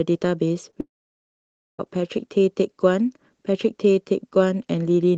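At 0.71 to 0.75 s, short concealed packet loss: about 20 ms of speech arrived too late and was patched from the preceding sound, leaving a brief smear. From 0.81 to 1.80 s comes a long network dropout, likely a network stall. A decaying buzz or hiss continues the last sound before roughly 0.9 s of near-silence, and the speech resumes with that stretch missing.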